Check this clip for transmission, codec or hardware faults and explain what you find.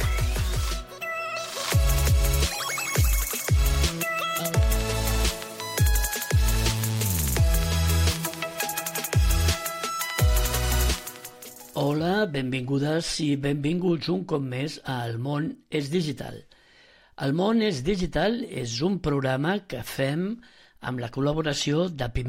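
Nothing stood out on listening to this clip.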